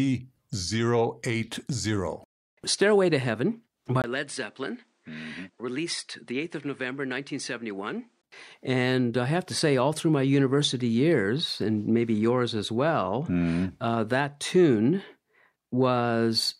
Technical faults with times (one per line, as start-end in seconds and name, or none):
4.02-8.23 input switched to a poorer device